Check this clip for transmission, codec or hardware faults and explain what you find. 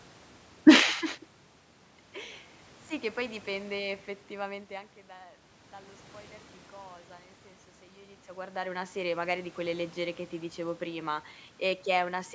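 No transmission, codec or hardware faults turn up in this clip.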